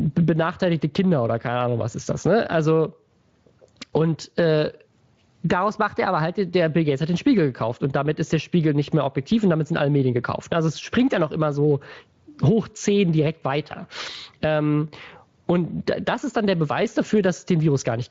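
Gain pumping runs through the whole speech clip: the level ducks by about 20 dB whenever the talker gets loud. The likely cause is gain set far too high with a fast limiter clamping down, leaving everything squashed, with light Speex coding on top.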